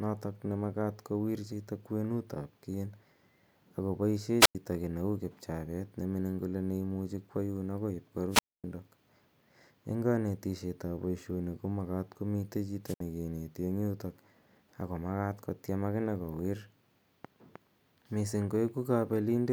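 Wireless microphone squelch dropouts at 4.40–4.55 s after "ako paishe", 8.30–8.64 s after "imuchi kwa yun akoi", and 12.85–13.00 s after "ko makat ko mitei" break this speech recording. Each time the analogue FM radio signal fades, hiss rises, and the receiver's squelch mutes the output for about 94, 250 and 64 ms respectively before the audio returns.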